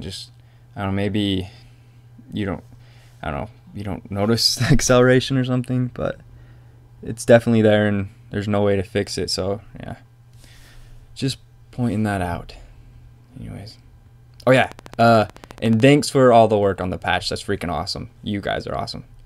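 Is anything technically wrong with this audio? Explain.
Yes. A train of clicks runs from 14.57 to 15.88 s. About twenty near-identical pulses arrive at a regular 13.8 per second, a little louder than the sound itself. They are likely caused by interference or a faulty connection. They sound like steady ticking.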